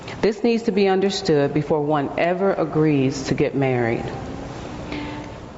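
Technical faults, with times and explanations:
Throughout, gain pumping: the level swings by about 15 dB, so loud and soft passages sit unnaturally close and the sound feels squashed. The likely cause is input gain set far too high, with a fast limiter or compressor clamping it on each peak. Unlike a noise gate, the floor never cuts to silence, and the audio stops cleanly at 8 kHz from the call path.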